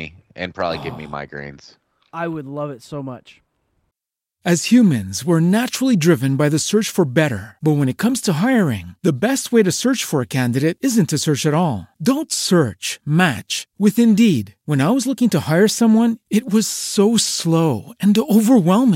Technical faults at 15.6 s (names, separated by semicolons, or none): none